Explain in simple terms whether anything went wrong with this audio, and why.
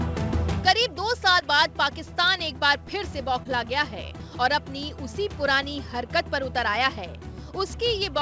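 Short concealed packet loss, at 1.40–1.43 s and 3.43–3.47 s: each time, about 20 ms of audio arrived too late, so the receiver stretched the preceding sound to cover the gap, leaving a brief smear. The call codec carrying it cuts everything above 8 kHz.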